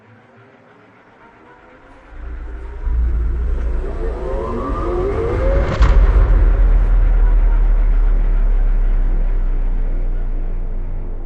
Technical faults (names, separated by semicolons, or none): none